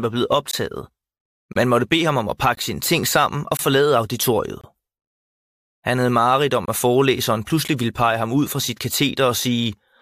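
A faint, grainy hiss rides on the speech, thickening on loud and bright syllables and vanishing in the pauses. That is sample clock jitter: the converter's timing wanders by a couple of microseconds, so fast-changing parts of the waveform are mis-sampled, leaving an error roughly 30 dB below the signal. The speech is also cut by abrupt, hard-edged silent holes at 0.51 s (after "var blevet"), 1.53 s (before "måtte bede ham om"), 2.55, 3.57, 4.61, 6.66 s (between "havde mareridt om" and "at forelæseren") and 7.68 s. Most last about 20 to 24 ms, and the final one about 10 ms. These are gaps between stream segments. Their roughly one-second spacing fits 1-second segments whose timestamps leave small holes that the player fills with silence, so no speech is lost, only delayed.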